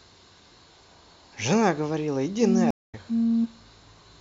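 At 2.71 s the speech cuts to silence for 226 ms, then returns at 2.95 s. This is a stream reconnect: the connection dropped, the player reconnected and started a new decoder partway through the stream. What gives it away, compared with a plain dropout, is that the speech does not pick up where it stopped. It jumps ahead by roughly 150 ms, so a short stretch is simply missing, and the first moment after the gap is muted or fades in as the fresh decoder settles.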